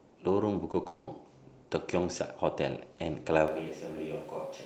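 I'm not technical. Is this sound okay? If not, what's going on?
No. At 0.71 to 0.75 s and again at 0.83 to 0.87 s the speech briefly smears or wobbles. This is short concealed packet loss: a few hundredths of a second of the call arrived too late, so the receiver stretched the sound around it to cover each gap.

Right after, from 0.87 to 1.09 s, a smeared, buzzy stretch stands in for the real speech, and that part is lost. This was likely a long network dropout, where nothing arrived for about a fifth of a second and the receiver kept extending the last sound until audio resumed.

From 3.48 s to the end, the speech suddenly turns roomy and hollow. It gets thinner and quieter, and background noise is more noticeable. The likely cause is a switch to a distant microphone, with the close microphone dropping out and one further away picking up the rest.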